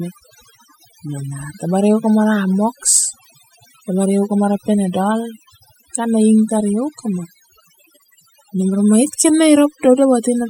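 From start to finish, the speech carries overdone noise removal. The noise reduction was pushed too hard. It mutes any frequency band near its noise estimate, taking quiet speech detail too. The background drops and breaks up into twinkling specks.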